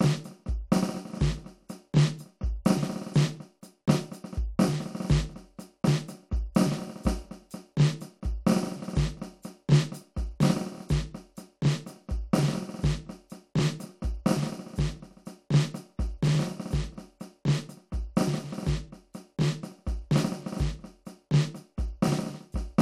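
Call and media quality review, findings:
No faults found in this music clip. Nothing in the audio calls for further review.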